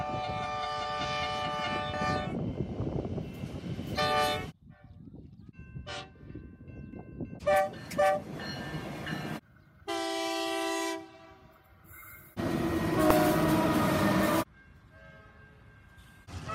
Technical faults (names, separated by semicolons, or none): damaged data in a compressed stream